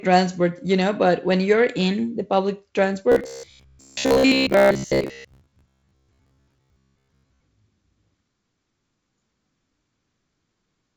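A speech clip. From 3.12 s to 7.42 s, right after "you're in the public", it turns into robotic sound from repeated short buffers. The sound becomes a rigid, metallic buzz at about 66.7 Hz that only roughly tracks the speech. That pitch points to a chunk about 15 ms long being looped. The likely cause is new audio arriving too seldom. The player then refills the gap by repeating its last short buffer. Most of the real audio in that stretch, roughly two thirds or more, is skipped. The clip also passes through G.722 wideband telephone coding, so speech is clear up to about 7 kHz.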